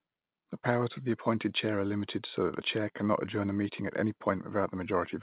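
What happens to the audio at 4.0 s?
Nothing goes wrong at 4.0 s: the speech carries on intact through the call path, with the same narrowband sound and nothing above 4 kHz, and no dropout, click or glitch.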